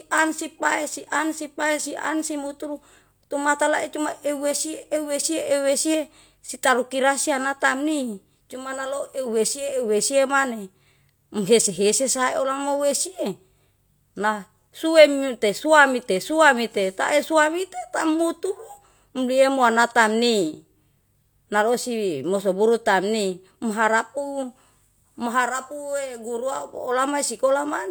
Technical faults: none

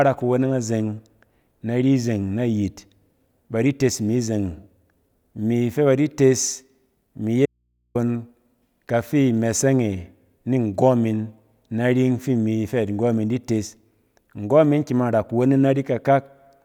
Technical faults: audio dropout to a faint residue

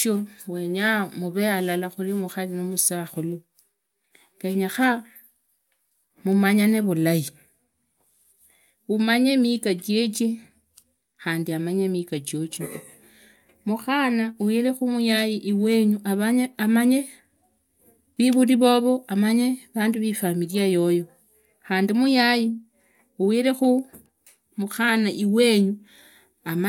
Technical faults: none

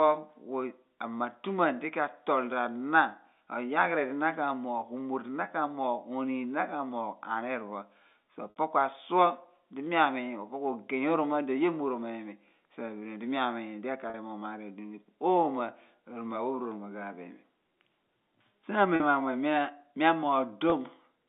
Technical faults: packet loss with pitch repetition

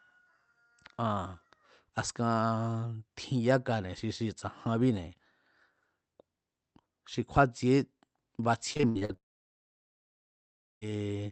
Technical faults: repeated packet loss (robotic sound); long network dropout

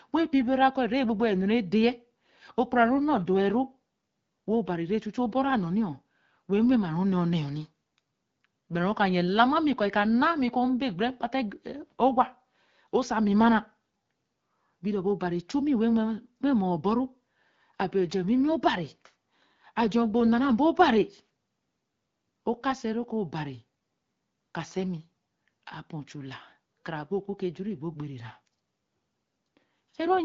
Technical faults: none

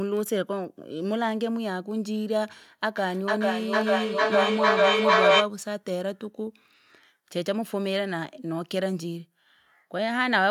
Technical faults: feedback echo between two devices

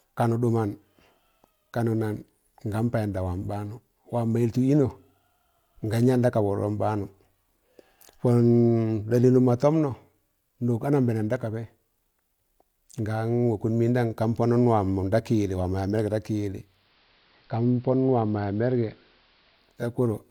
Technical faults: digital radio blending to analogue

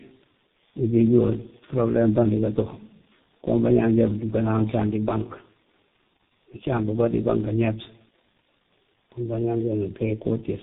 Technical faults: tandem speech coding

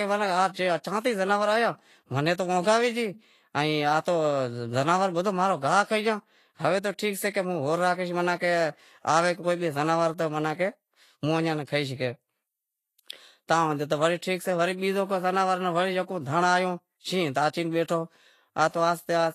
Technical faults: Vorbis compression

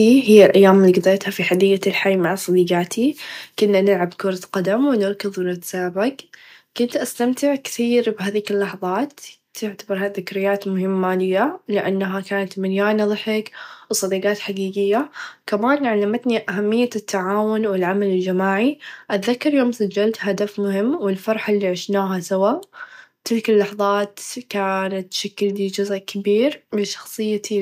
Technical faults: microphone overload; microphone volume stepped down

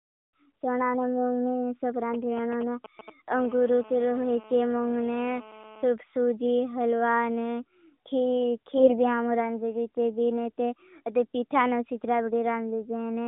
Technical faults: GSM signalling bursts; GSM phone buzz; AMR bit errors

